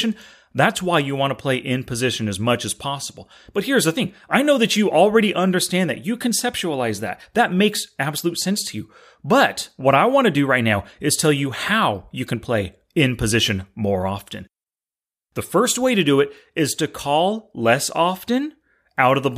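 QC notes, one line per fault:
7.59 s, corrupt FLAC frame: brief error, about -24 dBFS, just before "absolute sense to you". Flipped bits derailed prediction; the next frame decodes clean.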